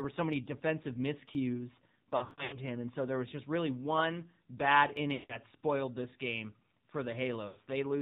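AMR narrowband mobile codec runs through the whole clip. At 7.4 kbps, the speech is cut off above 4 kHz and rebuilt from a vocal-tract model driven by sparse pulses, which gives a plainly buzzy, synthetic tone.

Dropped buffer (overrun) at 1.35 s: a small forward jump of around 10 ms. This is likely where the hardware overwrote samples before the program collected them, so the two sides are butted together with no gap.

Lost AMR speech frames from 2.17 to 2.58 s: 260 ms is missing, scattered over 360 ms, and the longest run is 140 ms. The decoder keeps reusing the last good pitch and vocal-tract settings at falling gain, so the speech smears, sinks toward silence and returns rough. Within this stretch, at 2.31 s, another dropped buffer adds a skip of about 10 ms.

A further dropped buffer at 4.97 s skips about 20 ms.

Lost AMR speech frames recur from 5.14 to 5.37 s (160 ms) and from 7.48 to 7.58 s (80 ms). 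Each time, the sound drags and fades before recovering weakly.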